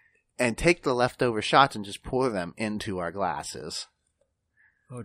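Right around 3.36 to 3.39 s there's a corrupt frame decoded. It's a quick blip lasting about the length of a single compressed frame, where some of the frame's bits got flipped and the decoder played it regardless. With the gains and codes misread, energy lands at frequencies that have nothing to do with the speech, so you get a short chirpy burst. It peaks somewhere near -20 dBFS.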